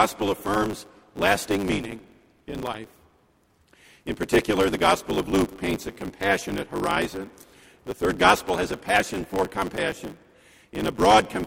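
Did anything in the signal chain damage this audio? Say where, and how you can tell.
Yes. The damage is at the driver or buffer stage, a block size mismatch (truncated) running through the whole clip. A steady 100 Hz buzz sits under the sound from start to finish, and everything moves about 1.16 times too fast while the pitch stays roughly normal. The writing stage hands over longer blocks than the reading stage takes, which fits a 512-sample block, so each block's tail is discarded at every boundary. A wrong-rate resample would raise the pitch along with the speed, and scattered buffer underruns would leave irregular gaps, not an even buzz.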